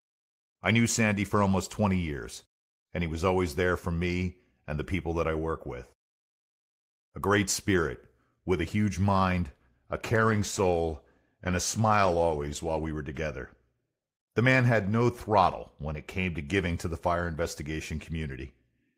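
A call bitrate drop runs from 10.04 to 12.97 s, starting just after "a huge mind a". The encoder was given far fewer bits and coded the speech more coarsely, so it sounds rough and grainy for nearly three seconds, which fits a fall from about 32 to 16 kbps.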